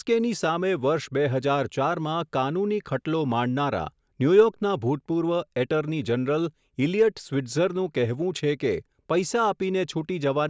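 No technical faults can be heard anywhere in the speech.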